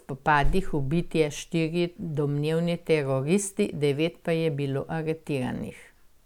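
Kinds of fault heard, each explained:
No audible fault turns up anywhere in this speech recording.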